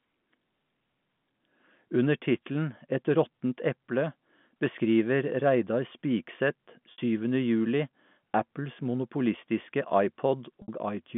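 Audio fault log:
6.92 s and 10.62 s, packet loss with pitch repetition: each gap lasts 60 ms, which fits three lost 20 ms packets. The receiver fills the hole by looping the last pitch period it had, so the sound briefly holds a buzzy, frozen tone, tapering toward silence over roughly 50 ms before normal audio cross-fades back in. The telephone band, capped near 3.5 kHz by the G.711 A-law path, carries through both repairs unchanged.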